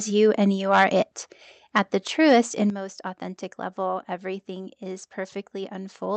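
The microphone input level was likely set too high, so from 0.73 to 0.84 s, right after "you and you", peaks overshoot the converter's limit by about 7 dB. A small share of samples are flattened, giving a harsh crackle (microphone overload). At 1.02 s the call software likely cut the device's input gain in one step (microphone volume stepped down), dropping voice and background together by about 5 dB. The input likely overloaded again from 1.76 to 1.79 s, about 6 dB over, with briefer crackling. At 2.70 s the software likely stepped the microphone volume down once more, about 8 dB, so the level falls abruptly just before "most authentic level everything".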